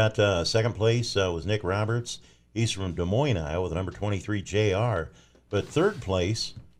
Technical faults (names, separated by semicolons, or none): none